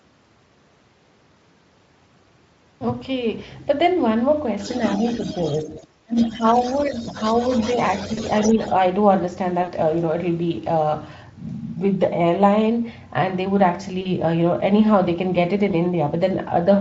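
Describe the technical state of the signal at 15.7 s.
At 15.71 to 15.75 s there is VoIP packet loss concealed by the speech codec: about 20 ms of audio never arrived, and the decoder filled it by repeating its last pitch and spectral envelope at falling gain. It sounds like a brief buzzy or noisy smear with a weak or distorted recovery, against the light Speex colouring around it. On a spectrogram, the harmonics stretch flat and fade. On the waveform, a short run of near-identical periods shrinks in amplitude.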